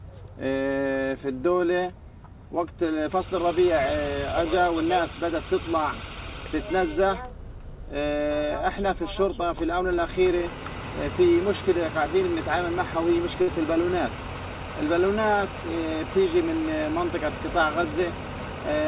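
At 13.42 s, a burst of packet loss hits, lasting to 13.49 s. Packets arrived too late or not at all. The receiver stretched the last sound for about 54 ms, fading it out. About 60 ms of audio is simply gone. Everything stays below 4 kHz, which fits a narrowband call codec such as G.711.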